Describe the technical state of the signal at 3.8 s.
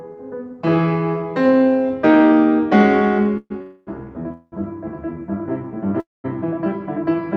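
At 3.8 s a call audio freeze runs from 3.62 to 3.89 s: the last sound stretches into a fading buzz, likely from a stalled jitter buffer, and then resumes unbroken.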